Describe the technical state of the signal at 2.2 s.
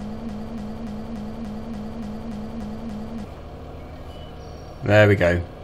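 At 2.2 s the audio is stuck in a broken-record loop: a fragment about 0.29 s long repeats exactly, back to back, like a skipping disc. The loop is already running when the clip opens and continues to 3.24 s, cycling roughly ten times. The likely cause is a stalled player, encoder or stream that kept resending the last fragment it held, so whatever should have played during that stretch is missing.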